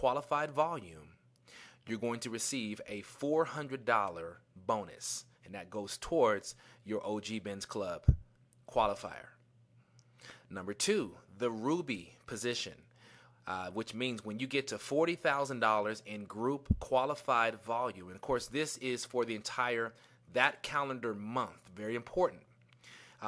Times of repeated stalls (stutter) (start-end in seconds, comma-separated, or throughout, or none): none